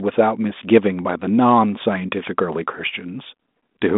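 No technical faults can be heard anywhere in this speech.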